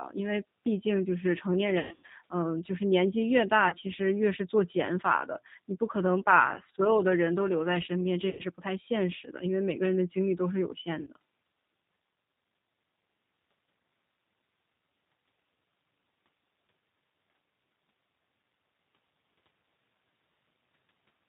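Speech, carried throughout by the G.729 codec at 8 kbit/s, and the codec damage is plainly audible. Everything above 4 kHz is missing, so the sound is dull and boxy. The voice comes across slightly rough and synthetic. That is the coder rebuilding each 10 ms frame from a vocal tract filter, a pitch predictor and a few pulses, rather than sending the waveform itself. VoIP packet loss concealed by the speech codec breaks in four times. The worst is from 1.79 to 2.11 s, where about 240 ms goes missing across 300 ms, with the longest gap at 120 ms. Smaller dropouts follow at 3.69 to 3.76 s (30 ms), 8.30 to 8.43 s (90 ms) and 11.01 to 11.10 s (60 ms). In each gap the decoder keeps extending its last pitch and filter at falling gain, so the sound smears into a buzzy tone or coloured noise that fades. Each frame builds on the one before, so the voice stays weak or distorted briefly after audio returns.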